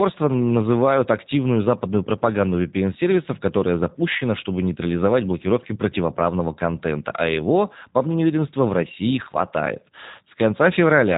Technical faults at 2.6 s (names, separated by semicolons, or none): G.729 codec